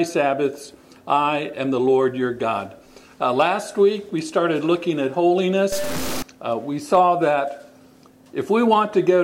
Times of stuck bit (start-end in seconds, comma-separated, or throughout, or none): 5.72-6.22